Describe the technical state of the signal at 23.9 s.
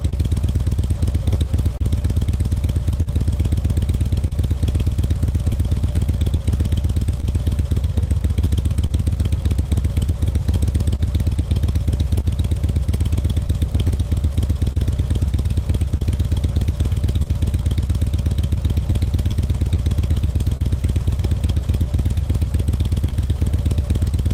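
Clock drift between sender and receiver is present at 23.9 s, as it is throughout the clip: the sender's clock runs roughly 2% slow, so the jitter buffer keeps draining and the receiver repeats short pieces. The everyday sounds catch with small timing hiccups at uneven intervals.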